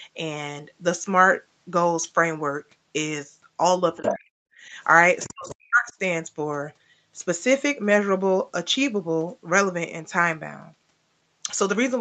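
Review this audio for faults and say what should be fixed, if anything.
Other side's voice leaking through appears three times: 3.95 to 4.15 s, roughly 5 dB below the main talker, then 5.2 to 5.3 s and 5.48 to 5.55 s, roughly 20 dB below. The likely cause is an echo canceller that did not fully remove loudspeaker playback picked up by the microphone. Unlike double-talk suppression, this adds a second voice rather than taking level away from the talker. Prevent it by improving echo-path modelling or using a headset.

Speech suppressed in double talk shows as drops in the talker's level at 3.99 to 4.42 s (deepest around 40 dB), 4.67 to 4.74 s (around 5 dB) and 5.27 to 5.94 s (around 40 dB). This is likely the canceller mistaking the talker for loudspeaker echo while both were active and turning everything down. It differs from a network dropout because the dips happen while far-side sound is playing on the loudspeaker. 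Prevent it with better double-talk detection or less aggressive suppression.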